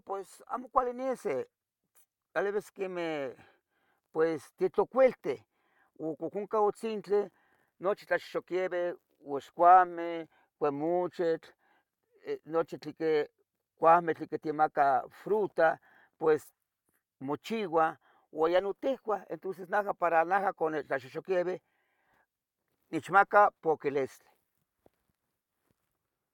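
Listening closely to the speech, nothing stood out as a technical fault at any point.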